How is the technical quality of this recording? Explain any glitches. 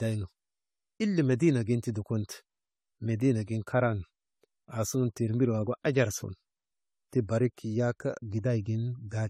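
The quality's noticeably degraded, with one issue running the whole way through. It's generation loss: the speech sounds swirly, hollow and smeared, consonant attacks blur, and nothing sits above 18.6 kHz. That's likely from around five rounds of lossy re-encoding, fitting about 64 kbit/s AAC-LC, each pass stacking fresh quantisation noise on a shifted frame grid.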